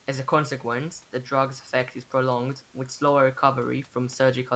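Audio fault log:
No faults detected.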